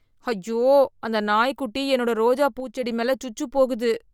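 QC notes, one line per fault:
Throughout: Bluetooth LC3 compression. The speech has a plainly audible grainy, breathy edge, with the upper spectrum thinned and patched with noise and nothing above about 20.3 kHz. This is likely LC3 at a low-to-moderate bitrate, which fits a 48 kbps stream coded in 10 ms transform frames.
2.60–2.83 s: sudden gain jump. Just after "அந்த நாய்க்குட்டி என்னோட ரோஜா", the level drops by about 6 dB from one sample to the next and recovers at 2.83 s, with speech and background noise falling together. This is likely a digital gain step applied without a ramp.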